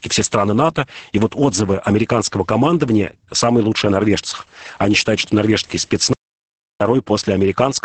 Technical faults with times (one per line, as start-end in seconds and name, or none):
0.00-7.84 Opus voice compression
6.13-6.81 audio dropout to silence